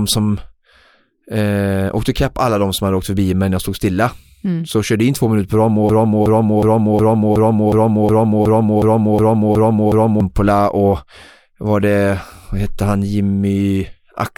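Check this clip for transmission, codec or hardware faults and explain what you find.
There's one clear fault: a broken-record loop from 5.89 to 10.20 s. A 366 ms fragment of speech repeats back to back, twelve times over, stuttering mechanically. It's likely a stalled player or stream resending its last buffer, so the speech in that stretch is lost.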